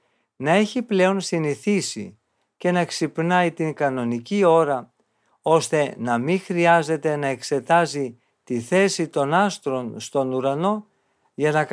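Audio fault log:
Nothing to log here, as the speech comes through without any audible technical problems.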